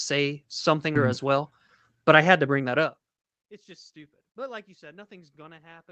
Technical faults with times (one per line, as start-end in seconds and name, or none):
0.95-0.97 skip ahead
1.23-2.69 jitter buffer speed-up